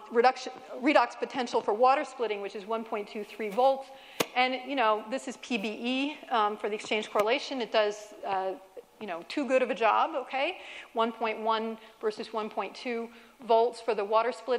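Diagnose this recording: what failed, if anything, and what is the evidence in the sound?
Nothing failed in this recording, and the sound gives no evidence of a fault at any stage.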